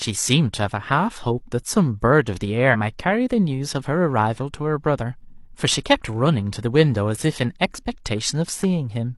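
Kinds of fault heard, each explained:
Damaged data in a compressed stream: a short stretch of the encoded speech stream arrived corrupted, so the decoder could not read those frames properly, lost its place in the stream and had to hunt for the next valid frame header before decoding could resume. The result is a brief chirp, squawk, click or short hole cutting into the speech from about 2.70 to 2.76 s, roughly 60 ms, after which the audio picks up again.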